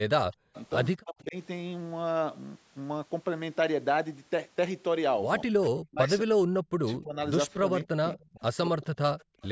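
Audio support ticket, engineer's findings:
Speech suppressed in double talk at 0.00–0.55 s, 1.03–1.36 s, 5.46–7.16 s and 7.59–9.04 s. Near-end talker dips in pieces, up to about 40 dB down (about 35 dB in the last span), totalling roughly half a second, a third of a second, a second and 0.7 s. Likely the echo canceller failing to separate local speech from loudspeaker echo and attenuating both. Spectrogram shows harmonics fading or gapping. Waveform envelope shows notches while the far side talks.

Echo leak at 0.54–0.64 s, 8.14–8.30 s and 9.19–9.49 s. A faint copy of the voice trails at a 224 ms delay, about 25 dB below the speech (about 30 dB in the last one). Likely residual echo passing a loudspeaker-side canceller and returning. Spectrogram shows weak duplicate harmonic traces offset 224 ms from the originals. Waveform shows small low-level bursts after the speech.

Background gated by the echo canceller at 9.32–9.41 s. 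Room tone drops by about 38 dB for around 100 ms, then returns. The canceller clamped the microphone during loudspeaker playback. Spectrogram shows a brief vertical band where the noise floor goes dark across all frequencies, within the call microphone processing's band, which is empty above 8 kHz. Waveform shows the noise floor collapsing to near-flat, then recovering.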